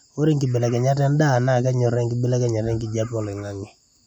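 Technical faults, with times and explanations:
No technical faults are present in this speech clip.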